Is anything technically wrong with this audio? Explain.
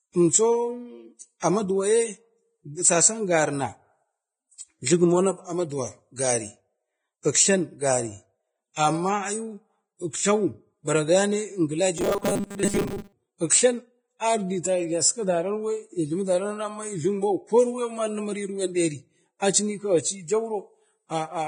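Yes. There are three problems.

Across the whole clip the speech sounds hissy and grainy, with roughened vowels and softened consonant attacks, and the treble is cut off. This is likely Vorbis compression at a low quality setting, which fits a bitrate of roughly 20 kbps. The damage is heavy. The codec has lowered its cut-off and quantised the remaining treble so coarsely that fine spectral detail has become noise of similar energy.

At 7.23 s a sharp onset is preceded by a brief hiss, and the attack itself sounds smeared rather than crisp. This is pre-echo. The codec spreads its quantisation noise evenly over a transform block, so when a loud transient arrives late in that block, noise scaled to the loud part also fills the quiet moment just before it. Here the smear reaches about 19 ms ahead of the attack.

From 11.98 to 13.12 s the speech turns into a rigid, metallic buzz fixed at 200 Hz, though it still roughly follows the speech. 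This is robotic sound from repeated short buffers, likely caused by audio arriving too seldom. The software fills each gap by replaying a short fragment, which fits a buffer of about 5 ms, and that repetition imposes the steady pitch. During this stretch roughly 70 percent of the audio is repeats rather than new sound.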